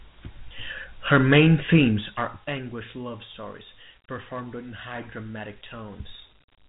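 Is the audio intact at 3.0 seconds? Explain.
No, Dialogic VOX ADPCM runs through the whole clip, including 3.0 s. The coding at 8,000 samples a second leaves nothing above 3.8 kHz, and its 4-bit steps add a gritty hiss that tracks the speech, unlike plain band-limiting.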